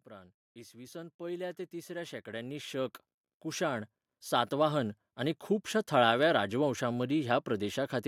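Right from 0.08 s there's automatic gain rising, and it keeps creeping up until about 5.46 s, adding roughly 18 dB by the end. The AGC decided the input was too quiet and kept turning itself up in small steps. Because it's working on the whole signal, the voice and the room noise behind it swell together, so the level climbs steadily for over five seconds.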